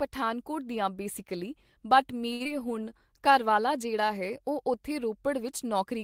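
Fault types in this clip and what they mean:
Short stall from a late packet: Around 2.33 to 2.42 s a packet showed up late, so the receiver held the last sound for about 67 ms until it arrived, then carried on where it left off. Nothing gets lost, but the sound hangs too long.
Short concealed packet loss: Right after, near 2.44 to 2.47 s, about 40 ms of audio never made it in time, and the receiver patched only around 9 ms with a continuation of the last sound. You hear a quick smear or wobble, and the delay drops by roughly 30 ms.
Jitter buffer slow-down: From about 2.79 to 3.34 s the receiver rebuilds its reserve by repeating tiny slices of audio, adding about 44 ms in total. That stretch plays at 93% speed with unchanged pitch, so it sounds a bit drawn out, maybe slightly warbly.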